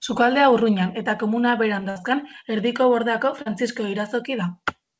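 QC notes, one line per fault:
1.90–1.97 s, burst of packet loss: about 60 ms of speech was lost or arrived too late to play. The receiver extended the last sound for about 56 ms while turning it down, giving a held buzz or fading hiss, then speech picks up further on with that stretch gone.
3.41–3.48 s, short concealed packet loss: about 40 ms never reached the decoder in time. The receiver bridged it by continuing the preceding sound from its pitch or as shaped noise, then blended back, heard as a brief smear within the 8 kHz-limited call audio.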